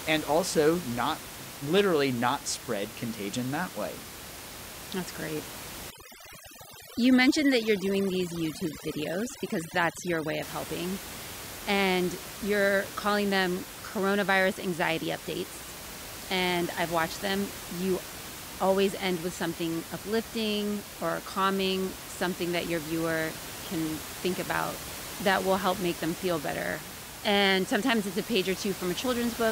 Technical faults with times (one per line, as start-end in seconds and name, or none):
5.90-10.42 overdone noise removal